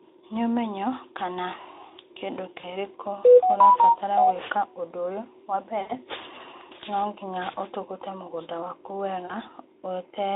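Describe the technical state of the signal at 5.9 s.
A brief buzzy, smeared tone that thins and fades runs from 5.81 to 5.93 s. This is VoIP packet loss concealed by the speech codec: about 80 ms of audio went missing, and the decoder filled the gap by extrapolating its last pitch and filter at steadily falling gain.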